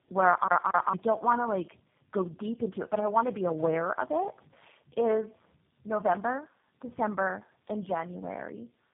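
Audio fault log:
throughout: tandem speech coding. The speech is rough, muffled and warbly, with nothing above 3.5 kHz, which fits three speech coders in a row, GSM full rate then G.729A twice. Each re-codes the previous one's errors, compounding damage beyond any single low-rate codec.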